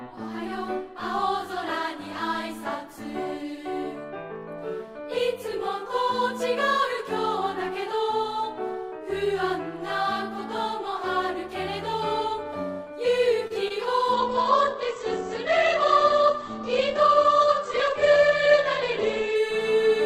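At 13.47 s a packet arrived late and the jitter buffer ran dry, causing a short stall from a late packet. The receiver held the last sound for about 27 ms, from 13.47 to 13.52 s, until the packet turned up, then resumed where it had left off. Nothing is lost, but that moment is drawn out slightly with a faint buzz or dip, and everything after it plays about 27 ms later than before.

At 13.68 s, roughly 20 ms of the call never reached the decoder in time, producing a short concealed packet loss that runs to 13.72 s. The receiver papered over the gap by extending the preceding sound for about 17 ms, then blended back into the real signal. What comes through is a brief smear or wobble, and any very short sound falling in that window can drop out entirely.

From 14.13 s to 19.43 s there is a call bitrate drop. The bandwidth estimate collapsed, and the encoder was pushed from 64 kbps down to 9 kbps for about 5.3 seconds. 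At that rate it codes far more coarsely and narrows the audio band from 20 kHz to 8 kHz, so the sound turns muffled and somewhat rough or watery, with the upper detail gone for the whole stretch.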